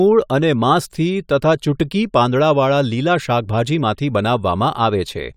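No technical faults can be heard anywhere here.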